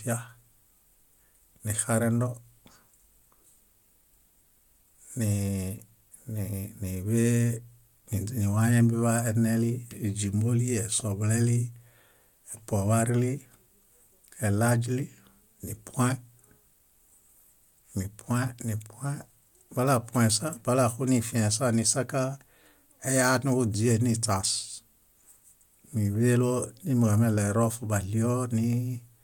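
No technical faults are audible.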